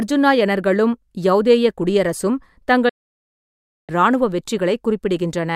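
At 2.89 s the speech fades out over about 8 ms into silence, a digital broadcast dropout. The receiver stopped getting valid frames and muted until clean ones arrived, so roughly a second is missing, consistent with about 31 lost frames. Sound resumes at 3.90 s.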